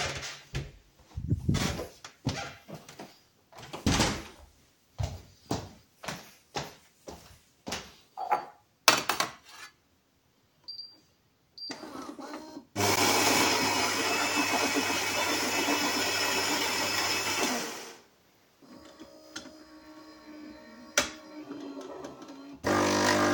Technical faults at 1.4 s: none

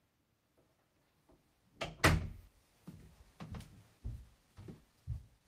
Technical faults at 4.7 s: jitter buffer speed-up

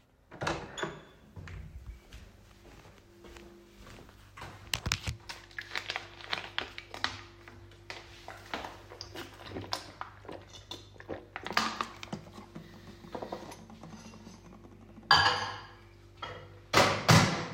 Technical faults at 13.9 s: none

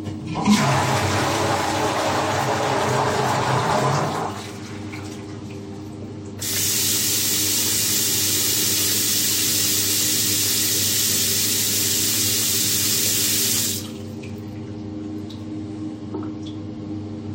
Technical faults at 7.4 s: none

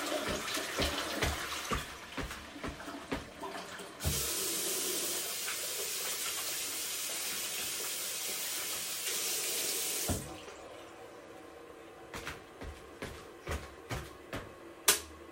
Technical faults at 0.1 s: none

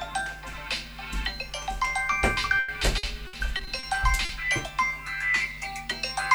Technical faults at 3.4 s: repeated packet loss (robotic sound)

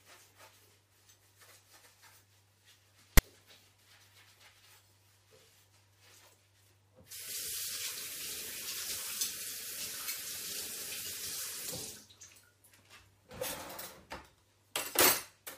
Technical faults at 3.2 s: file tags played as audio

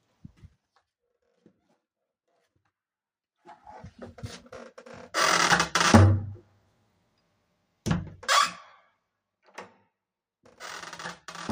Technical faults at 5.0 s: none

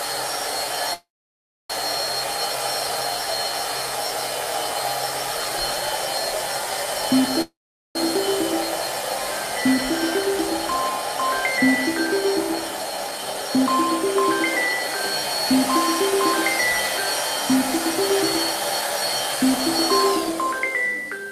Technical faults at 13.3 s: jitter buffer speed-up

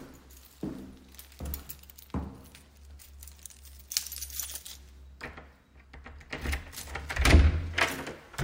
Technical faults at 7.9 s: none

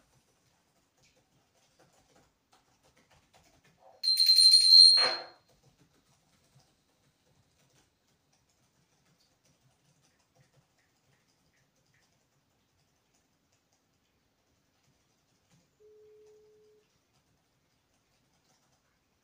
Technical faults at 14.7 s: none

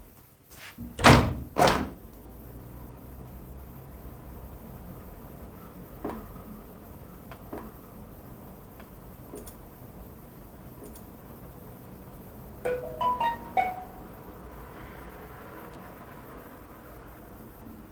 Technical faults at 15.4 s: none

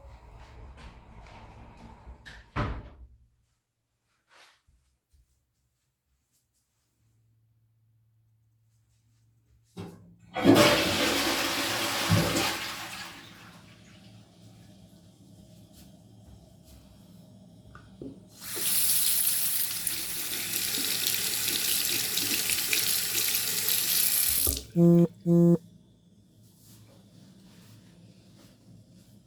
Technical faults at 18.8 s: call bitrate drop

